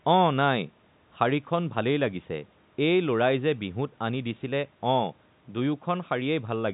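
No technical faults can be heard anywhere in the speech. The G.711 telephone coding path is audible as a band limit with nothing above about 3.8 kHz, plus at most a faint quantisation noise riding about 38 dB under the voice and following its level.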